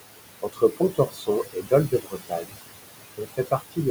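Noise suppressor artifacts run through the whole clip. The suppressor treats the steady room noise, which sits about 11 dB below the speech, as something to remove and pulls it down by about 20 dB, band by band and frame by frame. That reduction keeps shifting with the signal, so the background drops away in the gaps and swells back up under the speech.

Speech cut by the noise suppressor happens three times: 0.42 to 1.72 s, 1.88 to 2.59 s, and 3.17 to 3.78 s. Within each stretch the suppressor mistakes parts of the speech for noise and turns them down along with the background, by about 19, 21 and 19 dB at the deepest points. Roughly 0.7 s, 0.5 s and 0.3 s are affected in turn. Soft consonants and quieter passages sound swallowed or faint.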